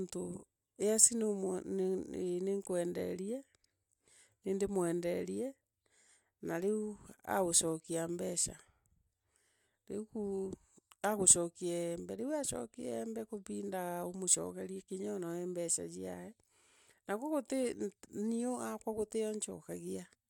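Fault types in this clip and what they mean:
No faults can be heard anywhere in this recording.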